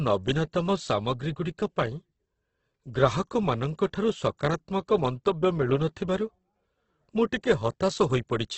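Right through the speech you get heavy Opus compression, likely a CELT encode near 12 kbps: nothing above 8.1 kHz, with tones gone grainy and rough.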